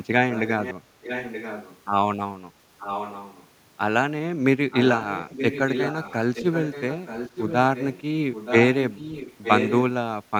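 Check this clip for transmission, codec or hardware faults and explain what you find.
An echo leak runs through the speech at 0.32–0.74, 1.02–1.79, 2.79–3.47, 4.71–6.15, 6.34–7.56, 7.75–8.02, 8.32–8.55 and 8.74–9.83 s. A loudspeaker's output, likely not fully removed by the far side's echo canceller, returns as a copy of the speech delayed by 924 ms. It sits below the direct speech and grows loudest in the final stretch.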